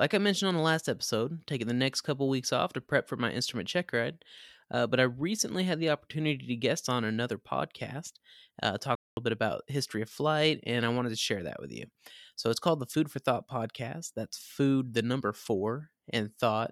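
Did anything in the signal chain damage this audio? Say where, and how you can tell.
Yes, a playback stall at 8.95 s: the speech drops to silence for 218 ms, then continues, likely because the player's buffer ran dry.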